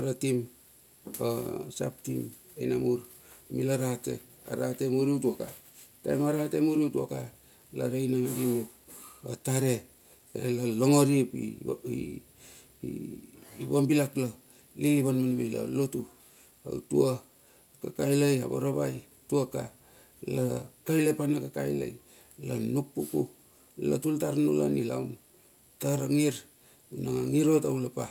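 From start to finish the speech carries aliasing: the audio was resampled to a lower rate without an anti-alias filter, so content above the new limit folded back down around 16 kHz, which points to a 48 kHz to 32 kHz conversion. Sibilants sound gritty and metallic, with spurious tones sitting roughly 25 dB below the voice. Unlike a simple low-pass dullness, the spectrum runs hard up to the band edge, carrying energy unrelated to the speech.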